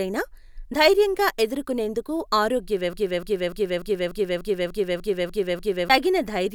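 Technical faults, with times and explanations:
2.93 to 5.90 s, broken-record loop: the speech suddenly catches on a fragment about 295 ms long and plays it back to back, exactly the same each time, ten times over, so you get that stuttering skip for nearly three seconds. It likely comes from the player or stream stalling and resending the last chunk it had buffered, which is also why whatever should have been heard in that stretch is simply gone.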